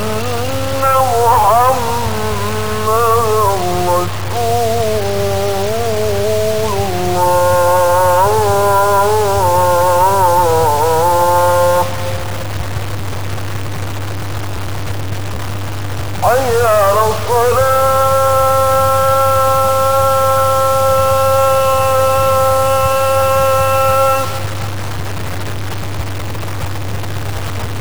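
Low bit depth without dither runs through the entire clip: the sound is rough and grainy, with the grit following the signal's level, and the quietest moments either cut to silence or sputter between steps. This likely comes from truncating to 4 bits without dither, leaving distortion only about 15 dB below the signal.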